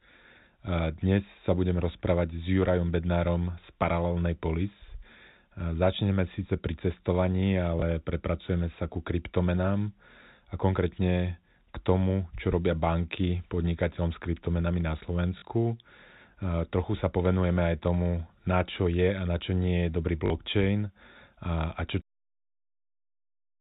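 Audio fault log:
7.8 s, 15.38 to 15.42 s, 20.26 to 20.3 s: packet loss with last packet repeated. The first gap, just after "začneme síce pri cestovaní" and before "prepracujeme sa ku kryptomenám", lasts 20 ms, which points to a single lost packet. The other two last 40 ms each, the second just after "čo nie je dobrý". In each the receiver replays the last packet it had received. That repeat seldom lines up with the pitch period, and the 40 ms runs buzz briefly at about 50 Hz, a short robotic stutter.
22.01 s: cut-off end. The sound stops abruptly just after "a a čo". The final buffers were never played out, so it falls straight to digital silence with no natural decay, and the hard stop lands in the middle of the sound. The silence fills the remaining second and a half. The telephone band limit of G.711 A-law coding at 64 kbps runs throughout and is normal for this path.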